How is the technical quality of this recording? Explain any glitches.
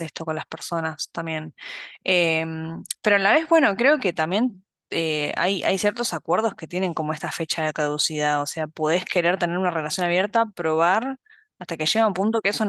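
No technical faults are audible anywhere in the recording, so there are no glitches to explain.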